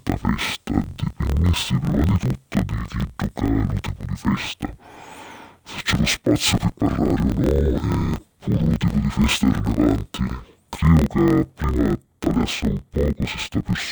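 Throughout the speech, interleaved audio is read as planar. Each 24 ms block of alternating left and right samples is split so its first half feeds one channel and its second half the other. Each half plays at half speed, so the voice drops an octave and sounds doubled and choppy, breaking up at the block rate of about 41.7 Hz. Unlike slowed playback, the overall pace of the speech stays correct.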